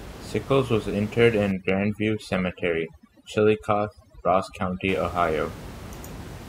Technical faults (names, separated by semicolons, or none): overdone noise removal